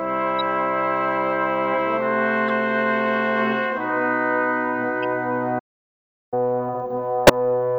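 Short digital blips at 0.39–0.41 s and 2.48–2.50 s, then a fainter one at 5.03 s, are corrupt frames decoded: each single damaged frame played anyway, scattering energy at wrong frequencies. The sound then cuts out from 5.58 to 6.34 s, a silence of about 732 ms, before resuming mid-flow. This is a playback stall, likely from the player running out of data or its thread being blocked. A louder, harsher burst at 7.27–7.30 s marks another corrupt frame decoded, this time spanning about three frames.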